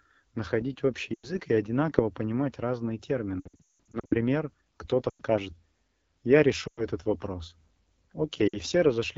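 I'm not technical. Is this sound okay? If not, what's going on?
No. The call used the AMR wideband (HD Voice) codec at one of its lowest quality settings, so the voice sounds rough and raspy throughout.

There are also lost AMR speech frames: bits of the signal were corrupted over the radio link, and the phone filled each gap by stretching out the last sound and fading it. You hear brief dropouts or warbles at 1.14 to 1.32 s, right after "находить общий"; 5.09 to 5.22 s; 6.67 to 6.84 s; and 8.48 to 8.60 s. The worst stretch, from 3.40 to 4.15 s just after "и одинаково понимать разные", breaks up repeatedly over nearly three quarters of a second.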